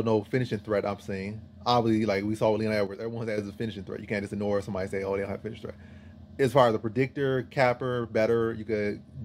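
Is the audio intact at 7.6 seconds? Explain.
Yes, the audio is intact at 7.6 seconds, with no fault at that point.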